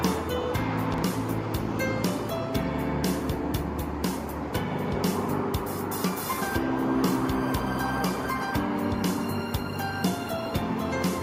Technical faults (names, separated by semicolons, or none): chunks out of order